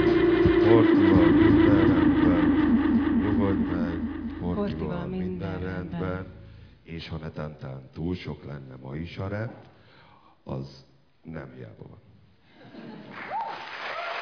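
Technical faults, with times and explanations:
No technical faults can be heard anywhere here.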